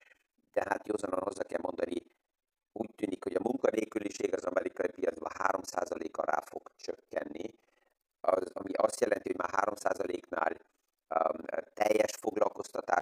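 From start to finish the speech carries overlap-add ripple: windowed frames were recombined with an overlap that fails to sum to constant gain, so level swings by about 60 dB once per frame, around 20 times a second, producing a harsh, fluttering tremolo.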